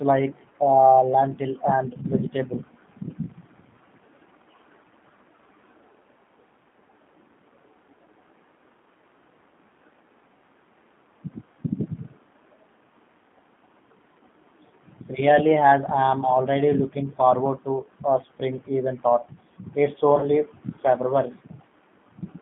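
A speech recording carried over a narrowband phone line. G.729 codec damage is plainly audible throughout. The band runs only from about 150 Hz to 3.5 kHz, so the voice sounds thin and boxy. The codec rebuilds each 10 ms frame from a vocal tract filter, a pitch predictor and a few pulses. That makes the speech rough and slightly synthetic, which fits the 8 kbit/s G.729A coder. VoIP packet loss concealed by the speech codec follows "spring even thought it's", from 20.19 to 20.30 s. About 40 ms of audio went missing, which points to two lost packets. The decoder filled the gap by repeating its last pitch and filter settings at falling gain. The result is a short, fading stretch of made-up sound in place of the real sound. Each frame depends on the one before, so the speech stays distorted until about 20.30 s, after the lost audio itself has ended.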